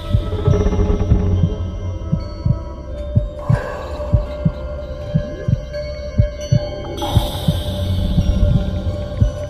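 Nothing in the audio stood out as a technical problem on listening.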